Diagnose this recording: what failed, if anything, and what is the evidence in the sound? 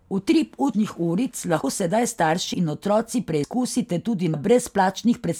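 The speech skips at 0.74, 1.64, 2.54, 3.44 and 4.34 s, with each jump about a tenth of a second of lost audio spliced shut with no gap. This is audio missing between chunks, likely at the driver or buffer stage, where one-second chunks each drop their tail while the next opens. On a waveform each joint shows a sudden step in the trace. A spectrogram shows a sharp vertical seam where harmonics break and resume mid-contour.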